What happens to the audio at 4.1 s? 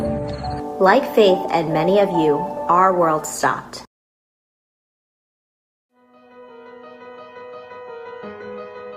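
Nothing goes wrong at 4.1 s; the audio plays through that moment intact, with no dropout, click or other fault.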